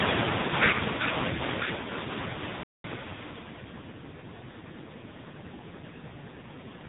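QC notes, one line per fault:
Throughout, AMR narrowband mobile codec: nothing passes above 4 kHz, and the speech sounds buzzy and synthetic, with heavy coding damage that fits a low bitrate near 5.9 kbps.
2.63 to 2.84 s, playback stall: the speech cuts to silence for about 0.21 s mid-flow, then resumes, likely because the player ran short of data or was blocked.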